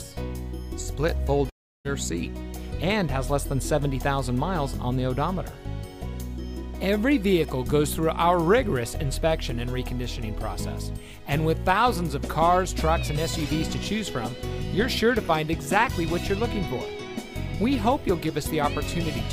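At 1.49 s the audio breaks off. The last sound is stretched into a buzzy hiss that fades away. A quiet stretch follows. At 1.87 s the sound resumes, but it picks up later than where it stopped. About 0.36 s of material is simply gone. This is likely a long network dropout. Packets stopped arriving, and the receiver filled the hole by extending what it last had before giving up.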